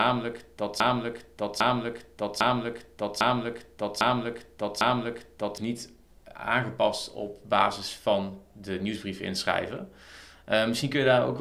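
A broken-record loop is already running when the audio begins and continues until about 5.58 s. A fragment of roughly 0.80 s plays back to back, identical each time, for six repetitions. The pass-through is exact, with no variation between cycles. The likely cause is a player, encoder or stream that stalled and kept re-sending the last buffer it held. Whatever should have been heard during those first five and a half seconds is missing.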